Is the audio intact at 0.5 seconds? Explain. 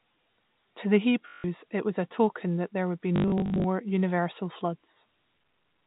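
Yes, at 0.5 s the speech is intact, with nothing beyond the narrow band of the G.711 telephone coding it passes through.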